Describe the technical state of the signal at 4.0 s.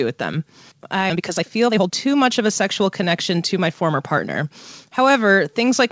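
At 4.0 s the sound runs hurried, about 15% faster yet at unchanged pitch. This is jitter buffer speed-up, from 1.13 to 4.42 s: after audio piled up in the buffer, the receiver repeatedly cut pitch-period-length pieces, removing roughly half a second.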